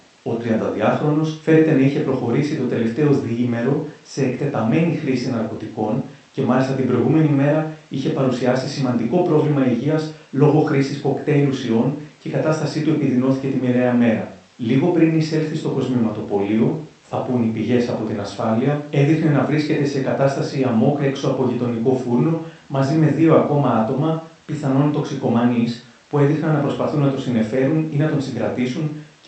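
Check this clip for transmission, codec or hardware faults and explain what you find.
No faults found.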